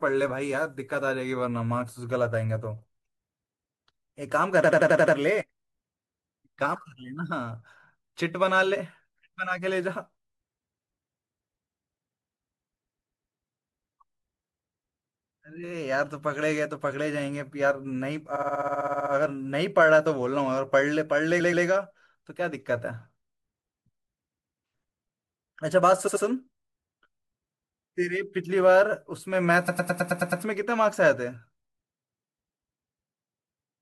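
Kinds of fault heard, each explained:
Repeated frames: a short run of compressed frames is decoded again and again, so the same slice of speech replays as a stutter. Seven stutters occur between 4.6 and 30.4 s. Blocks of 64 to 128 ms repeat two to twelve times, lengthening the audio by up to 0.77 s each time. On a waveform, identical block shapes tile side by side. A spectrogram shows the same pattern copied.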